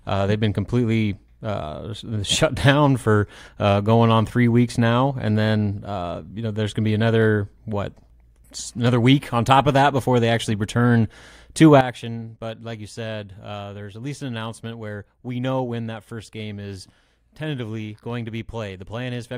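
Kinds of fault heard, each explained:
Sudden gain jump: At 11.81 s the speech and background noise both drop by about 12 dB with no fade, staying low to the end. A digital gain change applied without a ramp is the likely cause.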